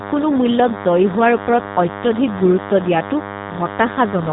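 A nearby DECT cordless handset or base station is emitting a radio burst every 10 ms, and something in the audio chain is rectifying it into the signal. The result is DECT cordless phone buzz running through the whole speech clip: a thin, steady buzz at 100 Hz, rich in harmonics, sitting roughly 15 dB below the speech. Because it never varies, it stays audible under every word and in the gaps between phrases.

The speech has also been carried through a G.729 codec at a rate consistent with 8 kbit/s, and the coding damage is plainly audible throughout. The codec discards the original waveform and rebuilds each 10 ms frame from a vocal tract filter, a pitch predictor and a handful of pulses, keeping nothing above 4 kHz. The speech therefore sounds muffled, rough and slightly synthetic.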